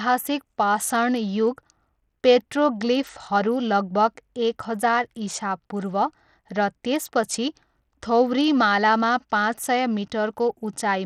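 A speech recording whose treble sounds thin and unsteady from start to finish, flickering in and out, with a gritty grain and aliasing on the sound. That plainly audible damage is likely Bluetooth SBC compression at a starved setting, consistent with roughly an 80 kbps bitrate.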